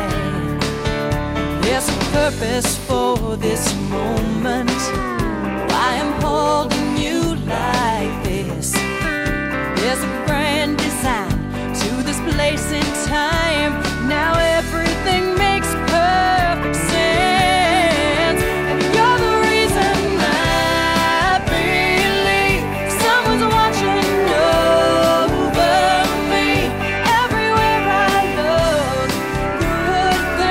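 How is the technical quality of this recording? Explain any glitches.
The technical quality of this recording is sound, and there are no glitches to explain.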